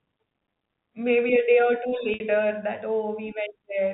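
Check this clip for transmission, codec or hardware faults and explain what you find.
One transmission fault is audible. From 2.14 to 2.20 s there is packet loss with pitch repetition: about 60 ms of speech went missing, which fits three 20 ms packets. The receiver concealed the gap by looping the last pitch period and fading it out over about 50 ms, so the sound briefly becomes a held, buzzy tone that decays almost to silence before speech cross-fades back in. The telephone band limit below 4 kHz comes from the G.711 mu-law coding.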